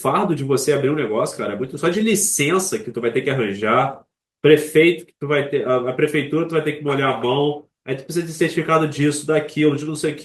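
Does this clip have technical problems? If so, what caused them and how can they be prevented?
Yes. Clock drift between sender and receiver runs through the whole clip. The sender's clock is slower by roughly 1.5 percent, so the receiver's jitter buffer keeps draining and must be refilled by stretching the incoming speech. Locking both ends to a shared reference clock, or using adaptive resampling at the receiver, prevents this.

Repeated timing corrections occur from 0.70 to 9.85 s as small, unevenly spaced edits. The speech plays at 98 percent speed, with short pieces repeated to add roughly a fifth of a second in total. Smooth, continuous resampling instead of discrete repeats prevents these edits.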